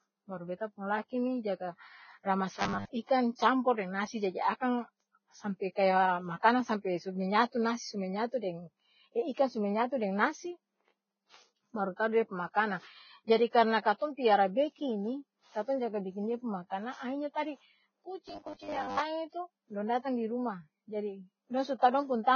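Throughout the speech, heavy damage likely from Vorbis compression leaves a grainy, hissy texture. The sound fits a bitrate near 16 kbps, and the spectrogram shows a sharp ceiling with nothing above 6.6 kHz.

From 2.55 to 2.87 s and again from 18.28 to 18.99 s comes a robotic sound from repeated short buffers, likely caused by 10 ms chunks being looped to cover missing data. Most of the real audio is skipped, leaving a rigid 100 Hz metallic buzz. On a spectrogram this shows as evenly spaced horizontal harmonics, and the waveform shows identical repeating cycles.

Pre-echo smears two attacks, at 13.27 to 13.30 s (spreading 25 ms) and at 13.98 to 14.01 s (spreading 34 ms). Codec noise fills the quiet moment before each onset as a brief hiss, visible as a faint broadband smudge just ahead of each sharp transient.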